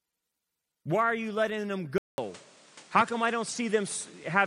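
Input switched to a poorer device at 1.98 s in this speech, just after "are you letting them". A 200 ms silence is followed by sound cut off above 10.5 kHz, a modest level change and new background noise, likely from a change of microphone.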